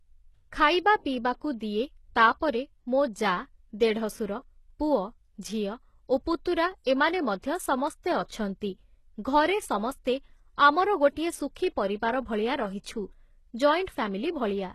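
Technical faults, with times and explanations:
Throughout: HE-AAC compression, likely. The treble is rebuilt from copied lower bands, so it sounds gritty and metallic, with nothing above 12.3 kHz, which fits a low bitrate near 16 kbps.
8.28–8.30 s: pre-echo. A sharp attack falls late in a codec block, so quantisation noise smears about 24 ms ahead of it as a short hiss, blunting the onset.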